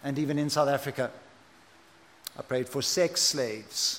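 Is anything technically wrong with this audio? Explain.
No, nothing is technically wrong with this audio.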